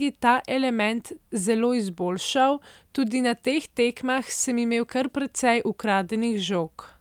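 A speech recording with no audible technical fault anywhere in the signal.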